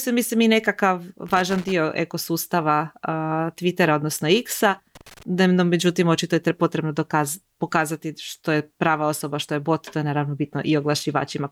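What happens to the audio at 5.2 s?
Loose connector crackle runs from 4.95 to 5.23 s: a dirty contact chops the speech into irregular scratchy bursts, seen as jagged waveform dropouts and broadband vertical streaks.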